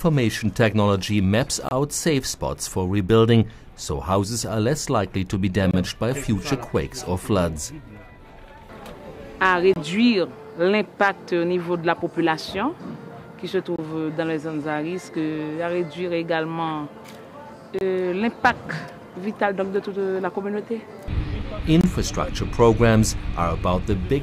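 The audio arrives in 4-second chunks with silence inserted at each join, so although nothing is lost, playback is cut by gaps between chunks of about 25 ms, at 1.69, 5.71, 9.74, 13.76, 17.79 and 21.81 s, heard as short holes at a steady rhythm.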